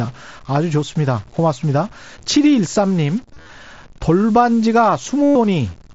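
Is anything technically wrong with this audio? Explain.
Yes, there are two faults. Grainy noise or distortion runs through the whole clip, and the pauses are filled with hiss instead of falling quiet. This points to a stuck bit, likely one data bit held at 0 or 1 by a faulty line or converter. It pushes about half the samples off by that bit's weight.

Concealed Bluetooth headset packet loss occurs at 3.25 to 3.49 s and again at 5.22 to 5.36 s. Packets dropped between headset and phone, and the receiver filled each gap by repeating recent waveform. In the first burst, about 143 ms was lost in scattered runs of up to 38 ms. In the second, about 128 ms was lost. Both sound like a held buzzy tone with a slight warble as the real sound resumes. Around these gaps, the wideband mSBC headset link adds only light graininess.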